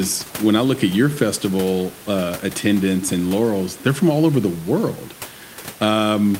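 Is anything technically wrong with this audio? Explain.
No, nothing technically wrong.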